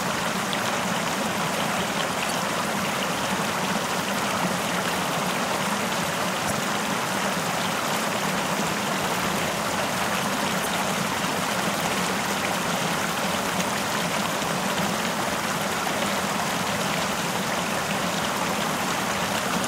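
At 2.27–2.31 s, 6.47–6.51 s, 10.62–10.66 s and 17.10–17.14 s you get short bursts of damaged data in a compressed stream: about 40 ms each, the decoder chokes on bad frames, loses sync, and spits out a brief chirp, squawk, click or short hole while it hunts for the next frame header.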